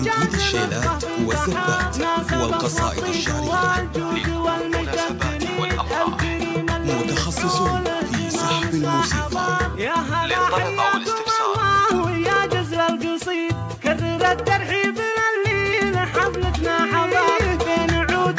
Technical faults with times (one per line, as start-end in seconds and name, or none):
none